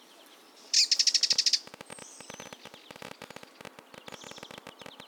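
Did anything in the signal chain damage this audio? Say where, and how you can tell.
Yes. A train of clicks runs from 1.33 s to 5.01 s: around fifty near-identical pops at about 14.7 per second, spaced irregularly and peaking about 5 dB above the surrounding sound. Because they stay the same shape and don't follow the audio's dynamics, they were added somewhere in the chain. The likely source is interference in the analogue wiring or a faulty connection or power supply. A spectrogram would show thin vertical broadband lines at uneven intervals, and the waveform would show sharp spikes standing clear of the signal.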